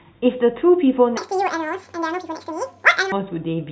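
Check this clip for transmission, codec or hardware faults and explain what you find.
One playback fault stands out in this speech clip.

Wrong sample rate, from 1.17 to 3.12 s: the samples are clocked out twice as fast as they were captured, with no rate conversion, which fits 8 kHz audio played at 16 kHz. Because timing and pitch both scale with the clock, the stretch runs at 2.0 times speed and sits 12 semitones, a full octave, higher. The speech turns squeaky and rushed, then drops back to normal pace and pitch once the section ends.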